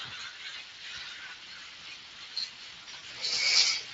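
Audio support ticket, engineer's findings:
Hoarse, grainy texture over all speech, plainly audible. Throughout.

Probable component: Speex codec. CELP coder short of excitation bits, so the residual is coarsely modelled and comes out noisy. Damage level fits a Speex mode around 20 kbps.

Brief smear, 0.49 to 0.54 s, about 40 ms missing. Voice sags, then recovers.

Worse at 2.83 to 3.04 s: repeated stretching and fading, choppy, weak speech across roughly 200 ms. About 120 ms lost in scattered gaps, longest run 60 ms.

Probable component: VoIP packet loss concealed by the speech codec. Decoder repeats last pitch and filter with falling gain, and errors carry into the frames after each gap.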